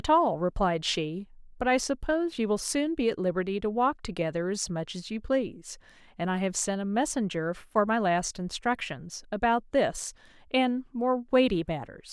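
Nothing here needs fixing: it's a speech recording, and no technical fault turns up anywhere along it.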